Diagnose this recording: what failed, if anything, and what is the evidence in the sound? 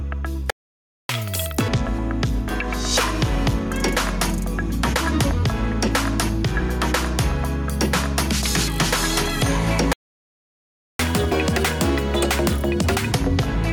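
Gain pumping runs throughout. The gain ducks by roughly 5 dB under loud sounds. The likely cause is excessive input gain driving a fast limiter.

Playback stalls silence the sound from 0.50 to 1.09 s (590 ms) and from 9.93 to 10.99 s (1.06 s). This is likely a buffer underrun or blocked player thread.

Catch-up at higher speed follows each stall. Playback runs at 2x, about ten semitones sharp, from 1.09 to 1.68 s, then at 1.5x, about seven semitones sharp, from 10.99 to 13.12 s. The player is resampling its backlog.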